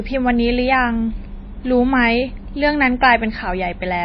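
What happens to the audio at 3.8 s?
At 3.8 s the speech still carries the MP3 compression that runs through the whole clip, likely from a low-bitrate encode around 24 kbps. Nothing sounds above 5.8 kHz, and weak frequency lines flicker between frames. That watery, swirling texture sets it apart from a plain low-pass filter, which would only dull the sound.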